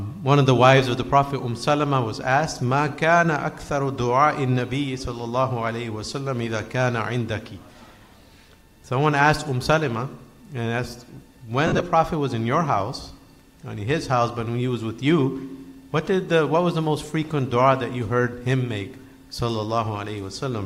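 Between 11.67 and 11.81 s, lost LE Audio frames break the sound. About 97.5 ms of audio is missing, scattered over 135 ms, which points to a run of short Bluetooth frames dropping out. The longest single gap is roughly 50 ms. The LC3 decoder fills each gap by repeating the last spectrum with random signs. Tonal parts therefore turn into a brief noisy smear. Beneath it, light codec compression is also present.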